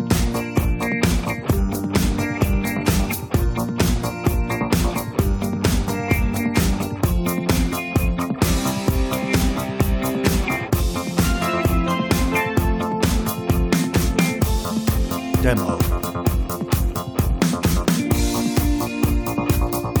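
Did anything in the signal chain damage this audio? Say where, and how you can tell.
No, no damage found.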